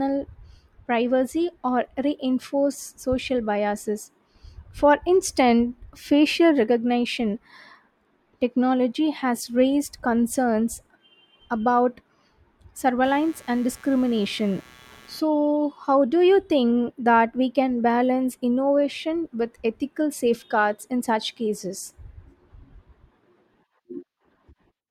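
From 13.04 to 15.20 s there's a stretch of computer activity noise sitting under the speech: a gritty, chirpy buzz pulsing at somewhere around 150 Hz, roughly 30 dB down from the voice. It's the machine's processor or graphics load shifting the ground that the audio circuit shares, so the buzz tracks what the computer is doing rather than anything in the speech, which is why it just appears for about two seconds and then stops.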